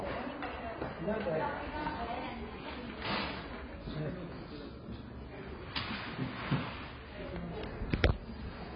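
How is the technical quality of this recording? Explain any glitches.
Not great: it's heavily compressed from start to finish. Throughout, there's nothing above about 5.6 kHz, so it sounds dull and smeared, with a warbly, fizzy texture. That's likely AAC compression, the AAC-LC flavour, squeezed hard enough to fit roughly 16 kbps, so the encoder cut the top end and starved the remaining bands of detail.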